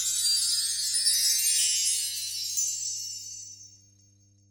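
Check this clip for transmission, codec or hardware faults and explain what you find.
One fault runs through the whole clip: mains hum. From start to finish a steady 50 Hz tone sits under the sounds, roughly 35 dB below them. Power-line current, picked up through a ground loop or a transformer close to the cabling, has leaked into the signal path. It comes through as a constant low drone with some low harmonics above it.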